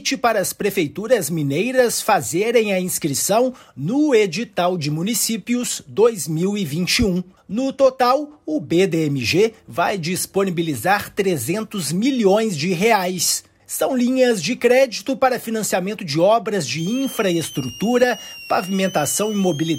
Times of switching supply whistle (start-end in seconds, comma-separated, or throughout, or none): 16.78-19.78